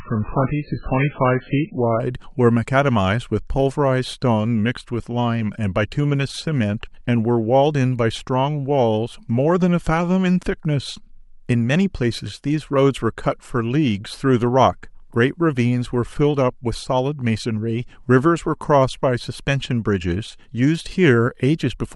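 For the first 2.0 s, an adaptive stream starting at a low bitrate leaves the speech dull and smeared, with nothing above 4.5 kHz, which fits a very low-rate MP3. At 2.0 s the quality jumps up with no gap, unlike a dropout, and stays there.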